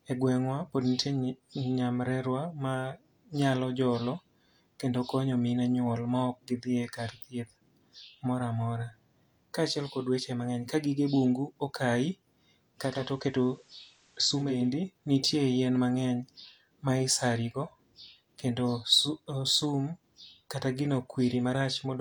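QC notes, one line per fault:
10.70 s, repeated buffer: right after "kod weche mang'eny" and just before "ka gige bungu okayi" there's a tiny hard-edged tick. The player ran dry and played its last chunk of audio one extra time. The chunk is only about 5 ms long, which fits a buffer of that size, so the doubling is too short to hear as a stutter and comes across as a click. Nothing seems to be skipped afterwards, so the speech just carries on.
12.74 to 14.73 s, digital radio blending to analogue: the receiver lost its digital signal and cross-faded to the FM version of the same station for about two seconds, then faded back. Each blend takes about 0.43 s, so the change slides in rather than snapping. On the FM stretch a faint hiss sits about 35 dB under the speech. The loudness stays the same.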